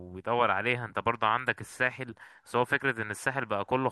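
No technical faults are audible anywhere in the speech.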